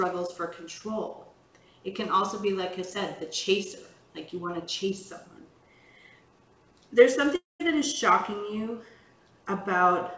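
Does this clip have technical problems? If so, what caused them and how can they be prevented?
Yes. From 7.36 to 7.62 s the sound turns into a fading buzz, then goes silent. This is likely a long network dropout, and about 240 ms of audio is lost. A steadier network link with less packet loss would prevent it.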